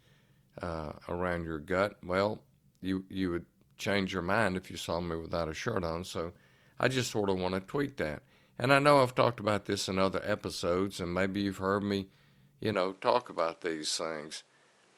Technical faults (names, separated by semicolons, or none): input switched to a poorer device